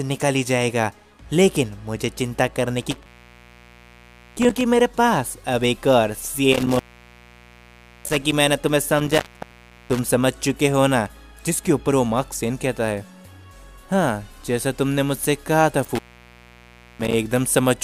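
Four dropouts with crackly edges and faint hiss in the gaps, at 2.81–4.61 s, 6.52–8.32 s, 8.99–10.09 s and 15.84–17.14 s: intermittent contact, a loose connection opening for about 0.7 to 1.3 s each time.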